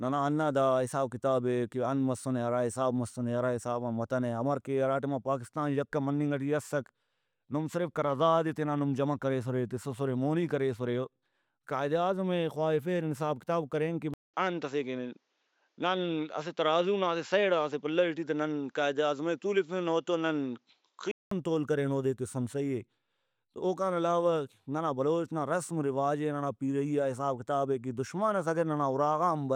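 At 14.14 s, just after "حساب کتاب کرین کہ", a 0.2 s silence opens a stretch where the speech turns duller, with nothing above 7.6 kHz and a faint new background noise roughly 50 dB down, while loudness stays about the same. This is likely an input switched to a poorer device. The gap at the switch, the changed noise floor and the abrupt return of full clarity at 21.31 s, before "تول کرین اودے تسُن", set it apart from a simple filter or codec bandwidth drop.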